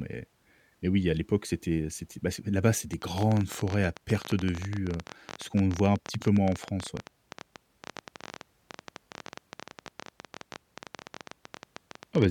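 The clip is speech with a train of clicks running from 2.93 s almost to the end, at 12.26 s. The clicks arrive at about 15.8 per second with uneven spacing. They all have much the same sharp shape. That adds up to roughly a hundred and fifty pulses. They stand out at about 10 dB above the speech and tick through the pauses too. The likely cause is electrical interference from nearby equipment or a faulty connection or power supply.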